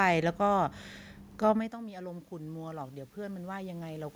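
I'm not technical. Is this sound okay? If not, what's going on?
No. Automatic gain rising runs from about 1.53 to 4.11 seconds. Around 1.5 seconds the talker moved away from the microphone, so the voice arriving there became much quieter. The recording system noticed the drop and began turning its own volume up slowly to compensate. Because that boost applies to everything, the voice and the room noise behind it swell louder together over those two and a half seconds, rather than the voice simply returning to its earlier level.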